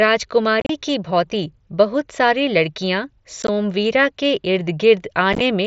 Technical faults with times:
0.60-0.70 unconcealed Bluetooth headset packet loss
3.42-3.49 unconcealed Bluetooth headset packet loss
5.33-5.41 unconcealed Bluetooth headset packet loss

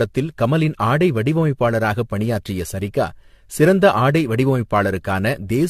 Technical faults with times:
0.00-5.69 generation loss

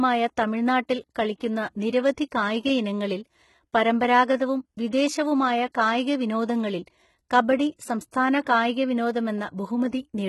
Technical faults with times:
0.00-10.28 HE-AAC compression
8.44-8.46 pre-echo

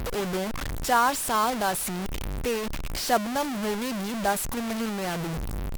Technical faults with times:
0.00-5.77 low bit depth without dither

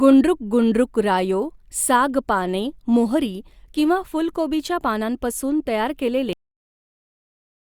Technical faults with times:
6.33-7.79 cut-off end

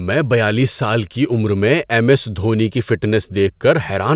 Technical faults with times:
none

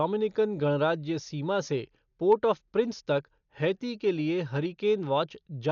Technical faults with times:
0.00-5.72 Dolby Digital compression

